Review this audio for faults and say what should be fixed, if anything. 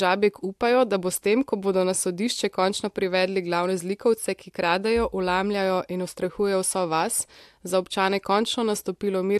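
Nothing needs fixing; no faults can be heard here.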